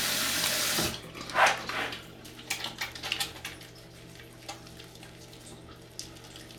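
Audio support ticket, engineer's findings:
No audio fault found in the sound during review; no component flagged, nothing to escalate.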